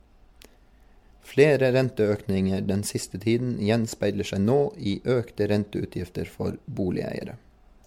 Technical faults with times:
0.00-7.87 generation loss

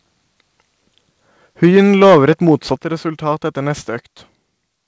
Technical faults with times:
1.63-2.55 microphone overload
1.77 microphone volume stepped down
2.76 microphone volume stepped down

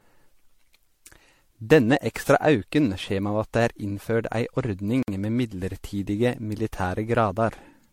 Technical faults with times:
0.00-7.92 generation loss
5.03-5.08 block of digital silence
6.59 block of digital silence

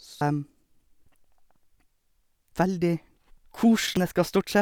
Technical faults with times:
0.21 damaged data in a compressed stream
3.97 damaged data in a compressed stream

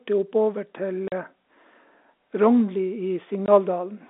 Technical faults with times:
1.08-1.12 packet loss filled with silence
3.46-3.48 packet loss filled with silence

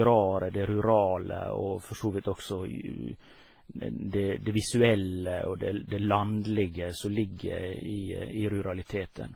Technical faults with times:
0.00-9.36 transcoding between lossy codecs

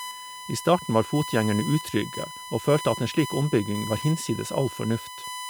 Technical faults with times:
0.00-5.49 USB whine

